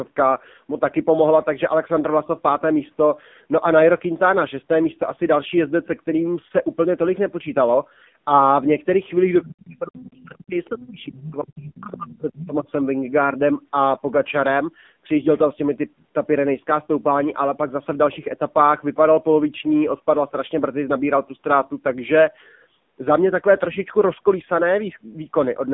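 Throughout, the AMR narrowband mobile codec at a heavily compressed mode, which fits a low bitrate of around 6.7 kbps, confines the sound to roughly 150 Hz to 3.6 kHz, leaving it buzzy, synthetic and dull.

From 9.43 to 12.69 s the speech is suppressed in double talk. The echo canceller, likely caught by both sides talking at once, turns the talker down for about three seconds in all, with dips as deep as about 35 dB.

Inside that stretch, the other side's voice leaks through, likely as loudspeaker echo the canceller missed. A faint scrap comes at 10.01 to 10.38 s, a barely audible blip at 10.65 to 10.69 s, and a clear intrusion at 11.22 to 11.73 s, only about 10 dB below the speech.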